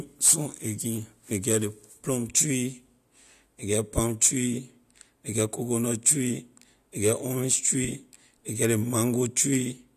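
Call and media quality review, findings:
Speech reviewed: no audible defects found.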